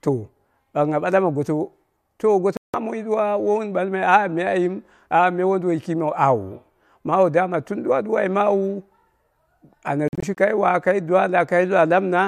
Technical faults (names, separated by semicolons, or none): digital broadcast dropout